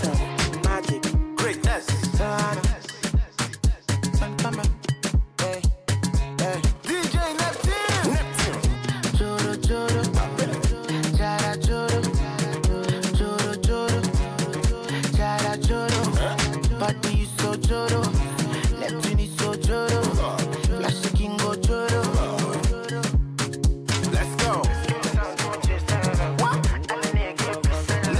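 Nothing in the recording stood out as a technical problem on listening.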